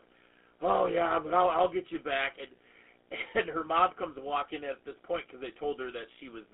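From start to finish the speech carries GSM full-rate codec damage, plainly audible. The coder models the vocal tract and excites it with a coarse, regularly spaced pulse train, which gives the voice a buzzy, gravelly roughness, consistent with a 13 kbps full-rate stream. The line band runs from about 250 Hz to 3.5 kHz. Plain telephone band-limiting would sound only thin and muffled. This grating buzz on voiced sounds marks the codec itself.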